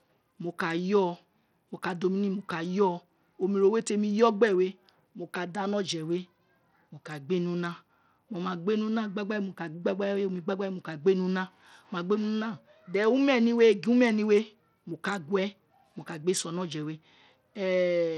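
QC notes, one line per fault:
Throughout, Bluetooth SBC compression: the speech has likely passed through a Bluetooth link using the basic SBC codec at a low bit budget, with a plainly audible loss of detail that fits roughly 80 kbps. SBC divides the signal into a handful of wide frequency bands and shares out bits with no model of hearing, so the weaker upper bands get starved. The treble thins and flickers, and a gritty, aliased noise rides on the speech.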